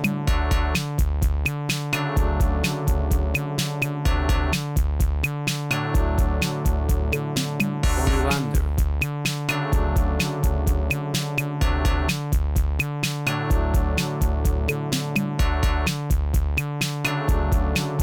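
No technical faults are audible.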